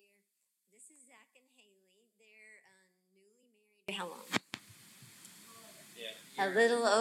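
The audio begins almost empty. From 0 to 3.89 s, the level drops by about 34 dB, leaving only a faint residue. The likely cause is one channel inverted. With one channel's polarity reversed, shared content cancels when the two channels are summed to mono.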